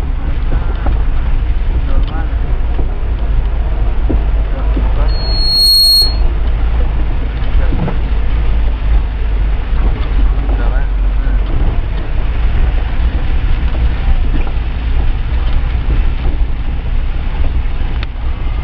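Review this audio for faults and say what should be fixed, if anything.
Loudspeaker feedback squeal from 5.08 to 6.24 s: a pure tone near 4.3 kHz swells over roughly half a second until it sits about 5 dB above the sound, because a microphone is hearing its own loudspeaker and the loop gain at that frequency exceeds one. To prevent it, reduce gain or notch 4.3 kHz, and move or aim the microphone away from the loudspeaker.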